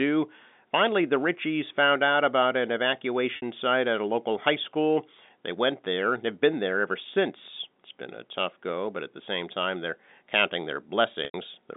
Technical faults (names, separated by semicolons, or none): packet loss with pitch repetition